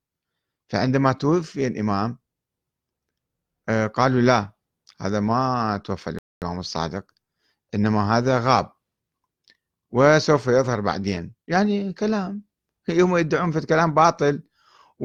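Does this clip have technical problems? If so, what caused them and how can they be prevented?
Yes. At 6.19 s the speech cuts out abruptly in mid-flow and stays silent for about 0.23 s, resuming at 6.42 s. This is a playback stall: the gap is dead silence rather than noise or distortion, and the audio then carries on. The likely cause is the player running short of buffered data, or its audio thread being held up by other work, so nothing reached the output until it recovered. Keeping a larger playback buffer and running audio output on a high-priority thread that never waits on disk or network access would prevent it.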